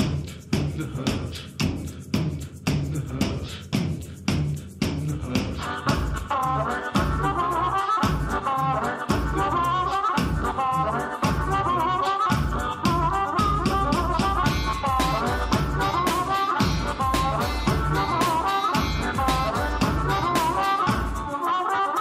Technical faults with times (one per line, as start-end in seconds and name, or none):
none